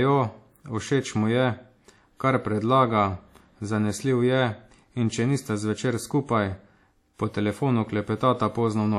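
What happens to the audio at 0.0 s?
Right from 0.0 s, and running through the whole clip, the speech carries clearly audible coding damage that's likely WMA compression, at a rate that fits roughly 48 kbps. A transform codec like this works on long blocks, so its quantisation noise smears over tens of milliseconds and quieter spectral detail gets dropped. You hear a ringing, washy quality with a hiss that swells and fades with the speech, and nothing above 18.8 kHz.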